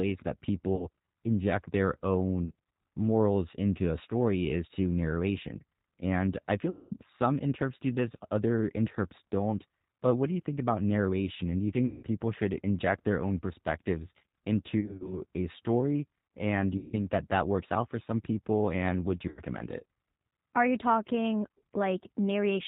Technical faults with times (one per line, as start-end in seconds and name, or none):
0.00-22.68 G.729 codec
0.75-0.87 VoIP packet loss concealed by the speech codec
2.45-2.55 VoIP packet loss concealed by the speech codec
6.70-6.94 VoIP packet loss concealed by the speech codec
11.86-12.05 VoIP packet loss concealed by the speech codec
14.81-15.21 VoIP packet loss concealed by the speech codec
16.78-16.97 VoIP packet loss concealed by the speech codec
19.28-19.41 VoIP packet loss concealed by the speech codec